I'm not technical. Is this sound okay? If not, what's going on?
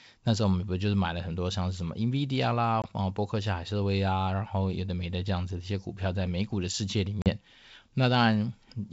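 No. There are two brief dropouts from packet loss on an ADPCM call. At 2.82 to 2.86 s about one packet's worth (20 ms) of sound goes missing, and at 7.22 to 7.30 s about two packets (40 ms). Each gap is a hard-edged silence. The receiving decoder works by predicting the sound and adjusting its step size in step with the sender, so after each gap it is briefly out of sync. The speech then returns slightly distorted, settling within a few tens of milliseconds. This happens within the wideband G.722 telephone coding, which is working as intended.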